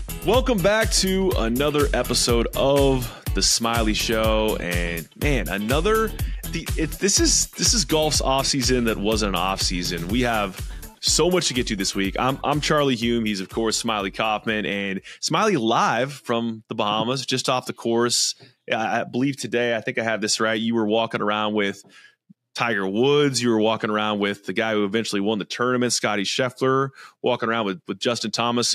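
Nothing stood out as a technical problem on listening to this sound.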